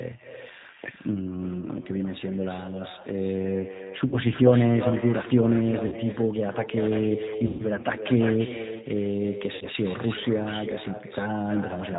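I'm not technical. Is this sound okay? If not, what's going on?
No. Three separate problems affect this speech recording.

First, there is echo with no canceller. The person at the other end of the call seems to be on a loudspeaker, and their microphone picked up the playback and sent it back, with nothing to remove it. So the speech is followed throughout by a fainter, thinner copy about a third of a second later.

Second, the whole call passed through the G.729 codec, a method that squeezes speech into a very small amount of data by rebuilding it from a simplified model of the voice. That leaves the speech understandable but plainly rough and slightly artificial, and it removes all the crisp high sounds above 4 kHz, giving a muffled telephone quality.

Third, there is VoIP packet loss concealed by the speech codec. Small pieces of the call went missing in transit, and the decoder filled each gap by stretching out the last sound it had, letting it fade. 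You hear a brief buzzy or smeared patch at 4.08 to 4.16 s, 5.88 to 5.95 s, 7.47 to 7.66 s and 9.55 to 9.66 s. The one at 7.47 s is the longest, about 120 ms of missing audio, and the speech can stay weak or distorted for a moment after each gap.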